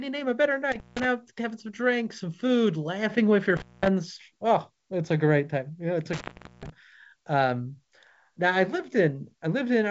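Intermittent contact breaks the speech at 0.72 to 1.05 s, 3.57 to 3.88 s and 6.13 to 6.70 s. A loose plug or cable opens the path for about 0.17 s, 0.21 s and 0.42 s, so the sound drops out with crackle at each edge and faint hiss between.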